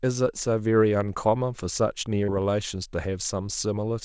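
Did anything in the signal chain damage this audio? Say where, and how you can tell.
Yes. There is short concealed packet loss in the network stage at 2.24 to 2.30 s. About 40 ms of the wideband call audio, which has nothing above 8 kHz, never arrived. The receiver extrapolated the preceding sound and crossfaded back, leaving a brief smeared wobble.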